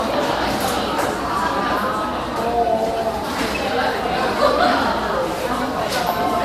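Generation loss runs throughout, from the first second to the end. The sound has a swirling, smeared, hollow quality, with blurred attacks and nothing above 15.7 kHz. This is likely the result of repeated lossy encoding, around ten passes through MP2 at a rate that fits 96 kbit/s. Each pass re-quantises on a shifted frame grid, so noise and spectral gaps build on one another.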